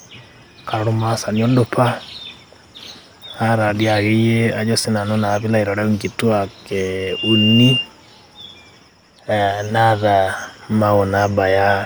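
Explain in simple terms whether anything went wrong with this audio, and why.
A microphone picked up the loudspeaker it was feeding, causing loudspeaker feedback squeal. From 7.00 to 7.90 s, a single piercing tone at 2.8 kHz swells up within about a third of a second and rings out louder than the speech before stopping.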